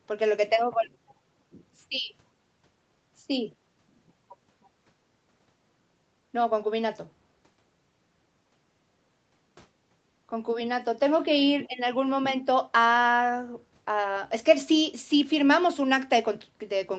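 Nothing goes wrong anywhere in this speech; the top end stops at 8 kHz, which fits a call codec running at a modest bitrate, and that's just how the call path normally sounds.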